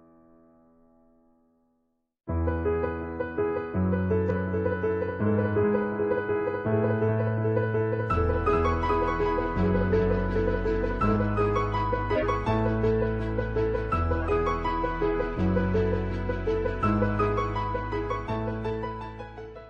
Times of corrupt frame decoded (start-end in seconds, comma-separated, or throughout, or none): 12.15-12.26, 14.20-14.27, 18.24-18.32